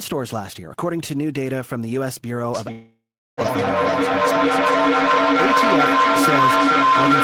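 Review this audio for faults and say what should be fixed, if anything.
A feedback howl starts at 2.54 s and runs to the end. Two devices in the room share the call, so each trip from loudspeaker to microphone adds level. The repeats narrow to a tone near 1 kHz and pulse about every 400 ms. At its loudest it sits about 8 dB above the speech. Mute one device or use headphones to break the loop.

From 2.71 to 3.40 s a stretch of about 660 ms is missing, likely a long network dropout. The receiver carries the last sound forward as a fading buzz or hiss, and roughly 350 ms of that gap is silence. The audio then resumes later in the stream without the lost part. A steadier connection or a larger jitter buffer would help prevent it.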